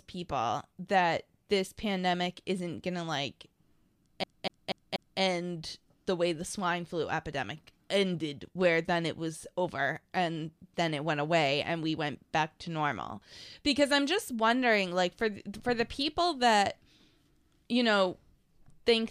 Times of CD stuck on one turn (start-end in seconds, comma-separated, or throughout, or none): 4.24-5.20